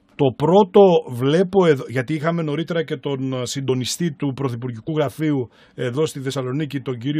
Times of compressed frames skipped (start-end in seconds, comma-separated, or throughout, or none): 3.68, 4.87, 6.30